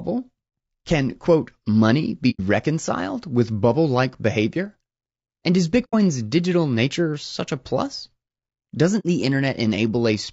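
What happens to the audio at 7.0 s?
At 7.0 s the speech carries the same low-delay AAC compression damage heard across the whole clip: the voice is rough and grainy, with noise filling the gaps between harmonics and a dull or synthetic-sounding top band. The likely cause is AAC-ELD coding, which fits a bitrate of around 32 kbps. Its short frames, about 500 frequency lines each, get few bits at this rate, so coarse quantization smears noise between the harmonics and thins the highs.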